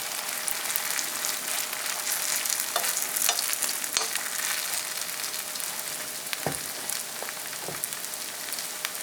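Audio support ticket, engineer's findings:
No audible faults found; nothing in the recording calls for further investigation.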